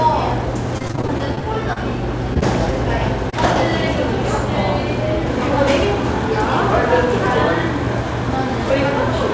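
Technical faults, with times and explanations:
0.78–1.78 s, repeated packet loss (robotic sound): about a dozen holes, up to 31 ms each, patched by stretching the last sound, so a fifth of that second turns choppy.
2.34–2.37 s, 2.39–2.43 s and 3.30–3.34 s, short concealed packet loss: each drop of about 20 ms, which fits one lost call packet, gets filled from the preceding sound and blended back, leaving a quick smear or wobble. Through this wideband call path nothing reaches above 8 kHz.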